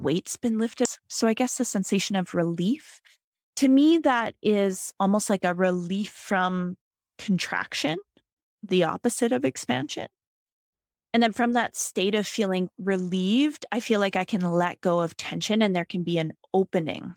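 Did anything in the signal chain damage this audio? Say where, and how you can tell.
Yes. At 0.85 to 0.87 s there is a skip ahead at the network and jitter buffer stage. About a second of speech is missing. Playback jumps forward with no gap filled. The two sides join almost directly, so later audio was already waiting when the stretch was dropped.

From 1.44 to 2.49 s there is a jitter buffer speed-up. The speech runs at 104% speed with unchanged pitch. The buffer held more audio than it aims for. It trimmed short pitch-period pieces repeatedly, removing about 50 ms in total.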